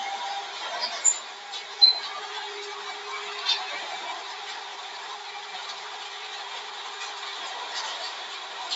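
Throughout, a speech noise suppressor treats these sounds as noise, ducking sustained parts and tails by around 5 dB while attacks pass, unlike compressor pumping, which follows loudness.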